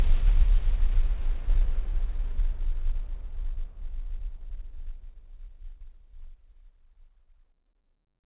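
No faults present; the audio carries the narrowband character of a call path, with nothing above 4 kHz, which fits G.711 mu-law coding.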